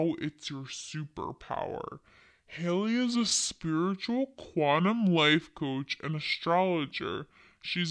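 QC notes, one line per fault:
Throughout, wrong sample rate: the speech sounds slow, heavy and deep, running at about 0.69 times normal speed and pitched down about 6.5 semitones, because the samples play back with no conversion at a lower rate, which fits 32 kHz material played at 22 kHz.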